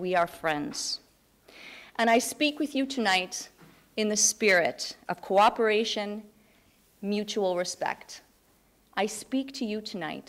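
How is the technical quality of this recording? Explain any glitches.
No technical glitches can be heard anywhere in the recording. There is nothing here that calls for explanation.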